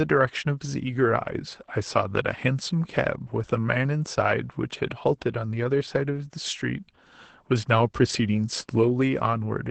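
Throughout the speech, Opus voice compression is plainly audible: the SILK coder's band stops at 8 kHz, so the spectrogram shows a flat ceiling there, with blurred harmonics below. Coarse excitation makes the voice muffled, hoarse and faintly robotic, which points to roughly 12 kbps.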